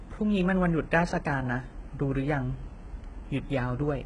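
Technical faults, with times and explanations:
Throughout, HE-AAC compression: the speech has an artificial top end that stops dead at about 11 kHz, with s sounds turning gritty and metallic. The likely cause is HE-AAC coding, where only the lower spectrum is truly encoded and the treble is rebuilt by copying lower bands upward under a coarse envelope. Harmonics therefore misalign above the crossover, and the heavy damage fits a bitrate near 12 kbps.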